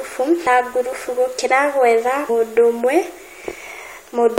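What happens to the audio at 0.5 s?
Right around 0.45 s there's a brief blip of damaged data in the compressed stream. Some of the data arrives corrupted, so the decoder misreads that frame, loses sync and hunts for the next header, leaving a quick glitch in the speech.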